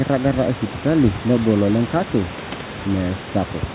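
No technical faults are audible in this speech.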